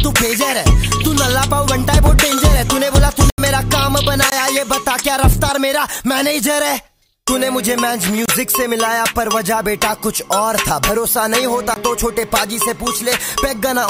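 At 3.30 s the audio drops out for 80 ms, until 3.38 s. This is a block of digital silence. A run of samples was replaced by zeros. The sound stops dead and returns with no fade. At this length it is a short hole. Three briefer blocks follow: 4.30 to 4.32 s, 8.26 to 8.28 s, and 11.74 to 11.76 s. Each lasts 20 to 24 ms. They sound like pops.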